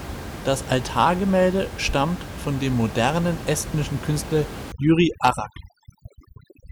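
Overdone noise removal sets in at 4.72 s and runs to the end of the speech. A noise reduction stage pushed too hard is cutting individual frequency bands down or out whenever they sit close to its picture of the room noise, so quiet parts of the voice are removed along with it. The background drops and breaks up into twinkling specks. Up to that point the room noise sits about 12 dB below the speech.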